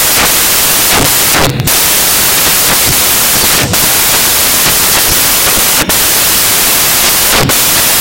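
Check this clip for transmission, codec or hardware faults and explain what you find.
One fault runs through the whole clip: samples built from the wrong bytes. The reader assembles each speech sample with its bytes misordered or misaligned, so the fast-changing low bits dominate. It sounds like loud, harsh broadband noise, close to white on louder speech, unlike steady hiss.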